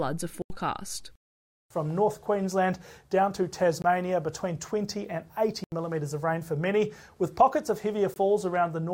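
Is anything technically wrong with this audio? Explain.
Yes, there are four blocks of digital silence, at 0.42–0.50 s and 5.64–5.72 s (80 ms each) and at 3.82–3.84 s and 8.14–8.16 s (20 ms each). Samples drop to silence with no fade, so the sound cuts out and back abruptly. The longer gaps sound like holes and the shorter ones like briefer holes, unlike a smoothed or concealed dropout.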